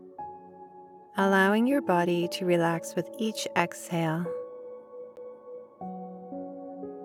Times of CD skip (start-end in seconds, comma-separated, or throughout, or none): 5.16